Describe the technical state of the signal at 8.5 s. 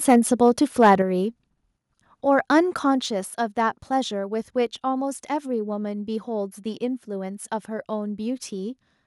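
At 8.5 s the speech signal is intact, with no audible fault at that moment.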